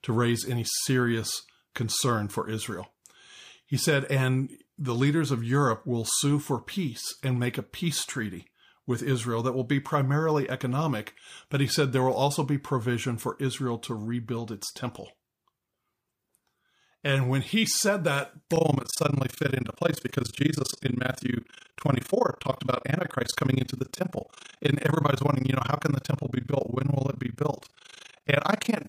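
Speech that was cut into windowed frames and rejoined with an overlap that does not sum to constant gain shows overlap-add ripple from 18.56 s to the end at 28.88 s: the level dips by about 60 dB roughly 30 times a second, giving a rough tremolo.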